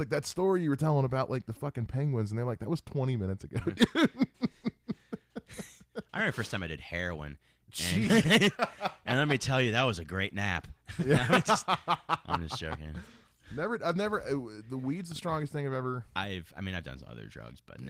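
No technical faults turn up in this speech, whose light coding texture and full audio bandwidth fit Opus voice compression working normally in its hybrid mode at around 20 kbps.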